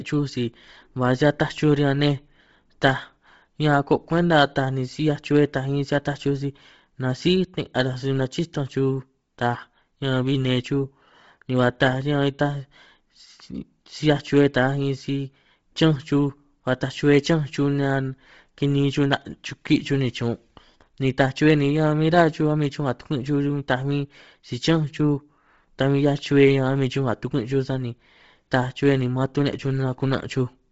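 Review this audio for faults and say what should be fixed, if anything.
The speech sounds breathy and grainy throughout, with nothing above 7.7 kHz, likely Bluetooth LC3 compression at a low bitrate, noise-filling the discarded highs. Record over a wired link or raise the LC3 bitrate.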